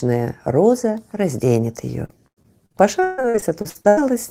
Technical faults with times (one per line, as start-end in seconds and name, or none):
2.05-3.99 repeated packet loss (robotic sound)